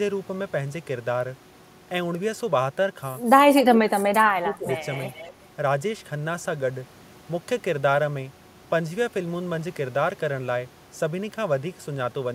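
Speech suppressed in double talk runs from 3.62 to 4.68 s, when the talker's speech sinks by as much as about 25 dB for roughly a second and thins or breaks up in places. The likely cause is an echo canceller that heard both ends talking at once. Unable to separate the near-end speech from the loudspeaker return, it attenuated everything its microphone picked up, taking the wanted speech down along with the echo.

Echo leak comes in at 4.53 to 4.77 s and again at 4.95 to 5.32 s: a faint copy of the speech returns about 0.25 s late, roughly 20 dB below the speech the first time and about 25 dB below it the second. These are short fragments rather than a steady repeat. Far-end loudspeaker playback was likely reaching a microphone whose echo canceller failed to remove all of it, so the residue was sent back down the line with a quarter-second lag.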